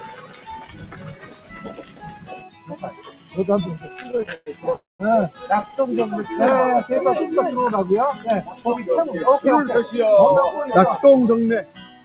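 Right from the start a speech-style noise suppressor is working on the whole clip, treating steady tones and tails as noise and pulling them down by roughly 15 dB at times. Attacks mostly get through, so the sound keeps pumping and thinning out. The whole thing also sits inside a call band with nothing above 4 kHz, which fits a G.711 A-law stream at 64 kbps.

From 0.00 to 3.37 s the suppressor cuts the sound hard, about 13 dB down at its deepest, across around three seconds. It comes back at 8.48 to 8.66 s with a drop of about 12 dB, and again from 11.63 s to the end, about 15 dB down. Held and decaying parts sink while sharper onsets poke through.

Between 3.86 and 4.75 s there's a stutter, repeated stalls where packets kept arriving late. The receiver stretched the last bit of sound over 17 short gaps, the longest 116 ms, so roughly a third of that stretch is filler. Nothing is lost, but it drags and hiccups.

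Right after that, from 4.75 to 5.01 s, a call audio freeze holds things for 0.24 s. A brief continuation fades into about 0.18 s of silence, then the sound picks up where it stopped. That's likely packets held up in transit draining the jitter buffer.

Another stutter follows at 5.54 to 5.77 s, with 8 tiny stalls of up to 11 ms, about a third of the span concealed. It's a quick flutter.

Then from 6.50 to 7.10 s comes a jitter buffer slow-down. The receiver repeated pitch periods to rebuild its reserve and added 43 ms, so the sound runs at about 94% speed with the pitch unchanged. It comes across slightly drawn out, maybe with a faint warble.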